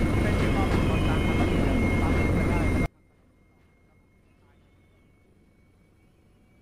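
At 2.86 s the sound collapses to a faint trace that lasts to the end. The level falls by about 36 dB. The likely cause is one channel inverted: reversed polarity on one side cancels everything common to both channels when summed to mono.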